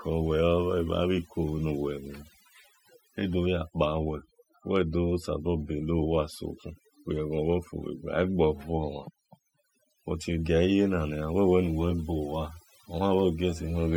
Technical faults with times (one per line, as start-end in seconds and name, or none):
0.00-13.97 overdone noise removal